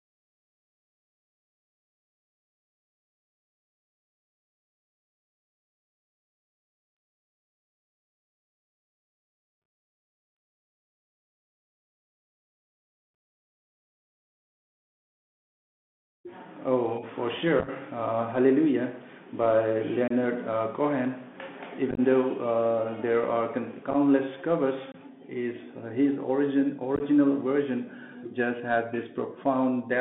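Speech carried over a narrowband Bluetooth CVSD headset codec. The band runs only from about 150 Hz to 3.5 kHz. The whole clip has a plainly audible granular hiss, scratchy s sounds and slope distortion on loud, bright sounds. This fits a 64 kbps CVSD link. Unconcealed Bluetooth headset packet loss punches short, hard-edged holes into the speech at 9.62 to 9.66 s, 13.14 s, 17.59 to 17.69 s, 20.08 to 20.12 s, 21.91 to 22.00 s, 23.91 to 23.95 s, 24.92 to 24.96 s, and 26.96 to 27.02 s just after "his origin". Lost packets were replaced by silence or an idle pattern, so the gaps sound choppy. The worst stretches lose 45 to 49 ms, scattered over about 68 to 83 ms.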